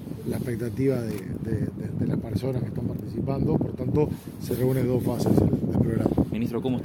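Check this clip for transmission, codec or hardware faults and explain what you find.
Nothing faulty can be heard anywhere in the recording.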